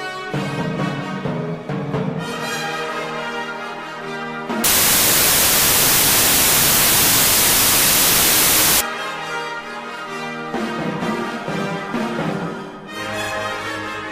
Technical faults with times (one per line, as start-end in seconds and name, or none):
4.64-8.81 wrong sample width